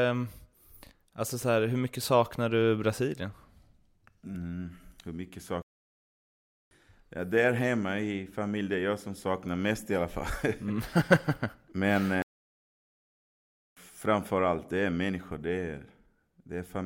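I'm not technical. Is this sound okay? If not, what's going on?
No, there's a playback stall twice: the speech cuts to silence from 5.62 to 6.71 s (about 1.1 seconds), and again from 12.22 to 13.77 s (about 1.5 seconds). Each time it drops out mid-flow, then carries on. The likely cause is the player briefly running out of audio data.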